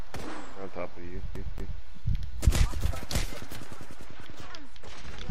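From 1.35 to 1.81 s the CD is stuck on one turn: a 227 ms slice repeats twice with brief mutes, showing as identical waveform blocks separated by gaps.

From 4.04 s to the end, channel delay causes comb filtering: one channel lags by roughly two samples, and summing carves a notch near 10 kHz, visible as a dark horizontal band.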